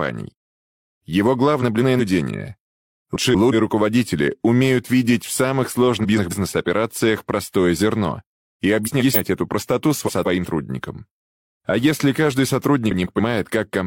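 Frames out of order at 1.61, 3.16, 6.03, 8.84, 10.07 and 12.91 s. Swapped blocks of about 186 or 139 ms cause garbled flutter.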